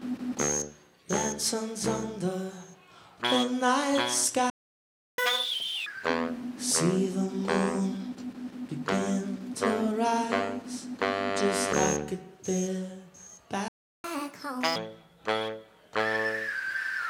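The audio cuts out twice in a playback stall, from 4.50 to 5.18 s (about 680 ms) and from 13.68 to 14.04 s (about 360 ms), likely from the player starving for data or a blocked thread. Each gap is followed by catch-up at higher speed: 5.18 to 5.86 s runs at 2x, up about ten semitones, and 14.04 to 14.76 s at 1.5x, up about seven.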